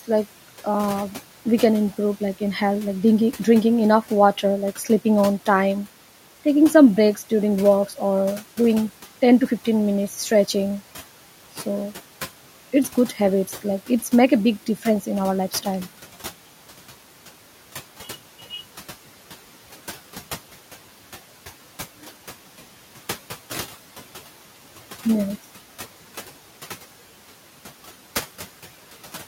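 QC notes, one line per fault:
Throughout: noise suppressor artifacts. Steady background bands are cut by about 11 dB frame by frame, so noise dips between phrases and returns under speech.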